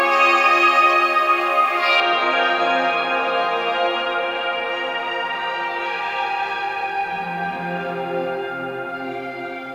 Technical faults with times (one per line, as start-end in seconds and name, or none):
0.00-2.00 pre-emphasis left on